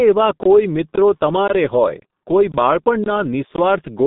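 Throughout, the speech carries heavy G.723.1 codec damage: at about 6.3 kbit/s the coder rebuilds the voice from a coarse model refreshed only once per 30 ms frame. It sounds muffled and hoarse with smeared consonants. A spectrogram shows energy confined to roughly 150 Hz–3.7 kHz, with a flat, empty ceiling above 3.8 kHz.

A gap between chunks falls at 0.43, 0.96 (right after "એવા કોઈ"), 1.48, 2.00, 2.52, 3.04 and 3.56 s. These are holes of about 21 ms every 0.5 s, left where the audio chunks were joined. They are heard as regular hard-edged dropouts. On the waveform they appear as flat-line slots, and on the spectrogram as thin vertical blank stripes.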